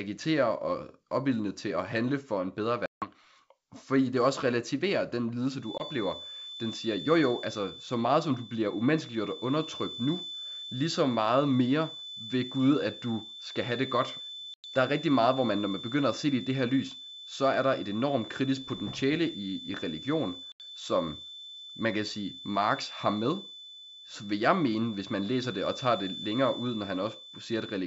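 Packet loss on an ADPCM call first occurs at 2.86–3.08 s. About 160 ms, several packets' worth, drops out as hard-edged silence. On resumption the decoder's predictor and step size no longer match the sender's, so the speech returns slightly distorted before settling. The same happens more briefly at 5.78 s (20 ms lost), 14.54–14.65 s (100 ms) and 20.52–20.61 s (80 ms).

From 5.57 s to the end, a thin, steady 3.5 kHz tone sits about 15 dB below the speech, swelling and fading slowly in level. This is likely a feedback whistle, from a loudspeaker-to-microphone loop held just short of runaway.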